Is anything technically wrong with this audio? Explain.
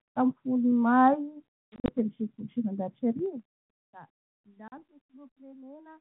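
Yes. Packet loss on an ADPCM call occurs at 1.69–1.99 s, where 120 ms of audio drops out in gaps scattered over 200 ms, none longer than 40 ms, and again at 4.68–4.81 s, with 40 ms lost. The decoder's adaptive predictor and step size lose track of the sender, so the sound returns slightly distorted and settles within tens of milliseconds. A plain dropout would resume cleanly.

Zipper noise runs from 3.09 to 3.88 s, as the level falls by roughly 25 dB in 2 dB jumps about fifteen times a second. Each unsmoothed jump leaves a small click, so a ticking rides on the fade.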